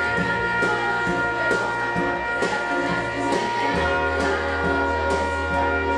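No fault is audible anywhere in the clip, with nothing in the audio pointing to a problem in capture, processing or transmission.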